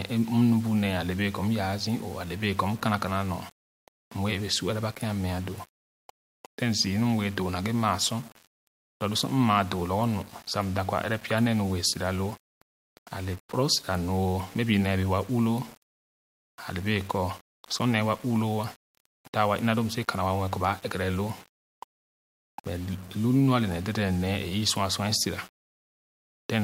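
Across the whole speech clip, a grainy, gritty distortion rides on the sound, sitting roughly 25 dB below the signal, and the quietest passages sputter or drop out. This is likely low bit depth without dither, which fits rounding to about 7 bits.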